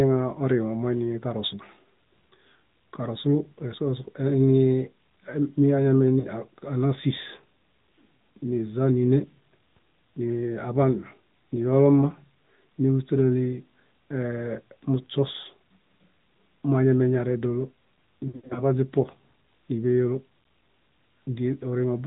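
Throughout, the AMR narrowband mobile codec is plainly audible. Nothing above 4 kHz survives, and the speech sounds buzzy and synthetic, which fits about 10.2 kbps. From 6.20 to 6.27 s, lost AMR speech frames cause a 40 ms gap. The decoder repeats its last settings, giving a brief warble. From 18.28 to 18.60 s, about 200 ms is lost in scattered bursts. The longest run lasts 80 ms, and the speech warbles and dips.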